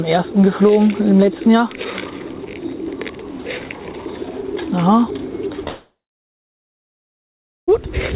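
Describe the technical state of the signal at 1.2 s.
At 1.2 s the signal is intact, with nothing above 4 kHz as expected from the band-limited call path, which fits G.711 mu-law at 64 kbps.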